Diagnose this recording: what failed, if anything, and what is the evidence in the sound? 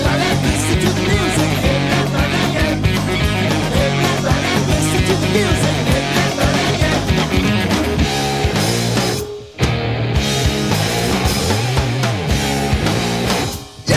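Nothing in the recording points to a failure at any stage of the chain. No event stands out in the sound that would call for a diagnosis.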